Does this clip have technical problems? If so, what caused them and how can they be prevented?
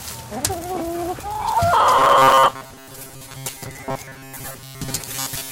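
Yes. From 1.99 s to 5.51 s there is robotic sound from repeated short buffers, a rigid 134 Hz buzz, likely from repeating a 7.5 ms chunk in place of late audio. A larger buffer and steadier audio delivery prevent it.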